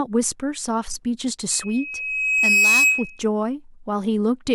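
A speech clip with loudspeaker feedback squeal from 1.51 to 3.22 s. A 2.6 kHz tone swells over about a second to roughly 10 dB above the speech. The microphone is re-amplifying its own loudspeaker.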